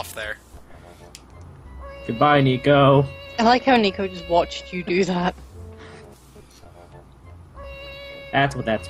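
At 7.63 to 7.65 s, compressed frames are skipped: a handful of 20 ms coded frames never reach the output, so the sound leaps ahead by roughly a tenth of a second. Unlike a dropout, there's no silent gap.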